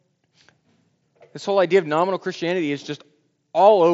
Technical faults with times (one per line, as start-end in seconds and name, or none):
none